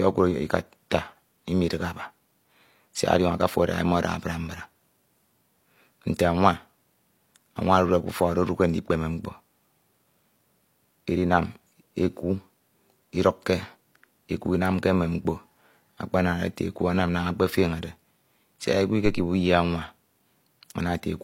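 At 19.06 s a phantom power thump interrupts the speech until about 19.32 s: supply voltage switching on the live input drives a step through the coupling capacitors. It sounds like a deep thud decaying in about 59 ms, seen as a large low-frequency waveform excursion and a dark band hugging the spectrogram's bottom.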